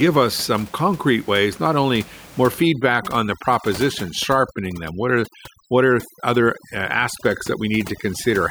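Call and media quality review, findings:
Overdone noise removal, 2.62 s to end of clip, onset right after "ways not only more". Background drops and breaks up into twinkling specks. Probable component: noise suppressor set too aggressive. Bands near its noise estimate are pulled far down or muted, taking quiet speech detail with them. Room noise, about 20 dB below speech before onset, is what the suppressor is attacking.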